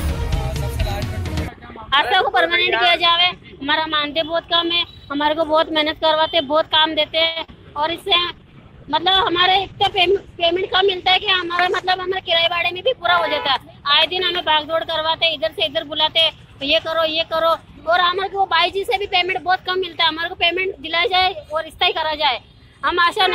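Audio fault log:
7.27–7.38 s: short stall from a late packet. A packet arrived late and the jitter buffer ran dry, so the receiver held the last sound for about 86 ms until the data turned up, then carried on from the same point. Nothing is lost, but the sound just before the gap is stretched unnaturally, and the playout runs about 86 ms later from here on.
7.44–7.50 s: short concealed packet loss. About 40 ms of audio never reached the decoder in time, and the receiver bridged the hole by extending what it had just played, then blended back into the real signal. What you hear is a brief smear or wobble of roughly 40 ms.
7.88–14.78 s: call bitrate drop. The bandwidth estimate fell and the encoder was pushed from 128 kbps down to 13 kbps, sitting at that floor for about 4.1 s. With so few bits the codec quantises coarsely and gives up the upper frequency band, so the audio turns muffled and watery, losing its air and crispness, and only regains clarity as the rate climbs back near the end of this span.
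11.63–12.73 s: jitter buffer speed-up. Audio had piled up in the jitter buffer beyond its target, so the receiver trimmed out short pitch-period slices repeatedly to shrink the delay, removing roughly 70 ms over about 1.1 s. Playback runs about 5% fast at unchanged pitch, giving a slightly hurried, pushed feel, and because it lands inside the low-bitrate stretch the rushed section also carries the same dull, band-limited tone.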